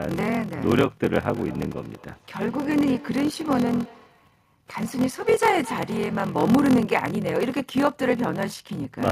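Throughout the clip there is a block size mismatch (padded). One stage hands over shorter blocks than the next reads, which fits a 1024-sample read, and zeros fill each remainder. The result is a 43.1 Hz buzz and playback running at 0.861 times normal speed.

From 1.36 to 6.89 s, feedback echo between two devices appears. One device replays what the other's microphone sent, and that microphone picks it up again outside the reach of either echo canceller. Words return roughly every fifth of a second, peaking at about 21 dB below the speech.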